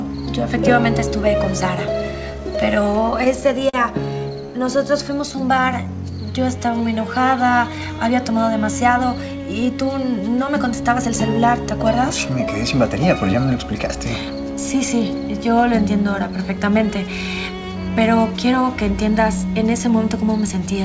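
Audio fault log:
2.96–4.82 s, scattered short gaps: about ten tiny dropouts, the longest roughly 40 ms, each patched by stretching the preceding sound. Brief ticks and smears result.
4.77–6.34 s, jitter buffer slow-down: repeated pitch periods add 121 ms, slowing playback to 93% at unchanged pitch. Sounds are drawn out slightly.
8.31–9.87 s, jitter buffer speed-up: roughly 100 ms of short pitch-period pieces are cut, running the audio at 106% with pitch kept. It sounds hurried.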